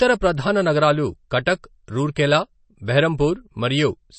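Throughout, the speech carries plainly audible MP3 compression damage, likely from a very low bitrate around 32 kbps: watery, swirly sibilants, and a spectrogram showing nothing above 8.3 kHz.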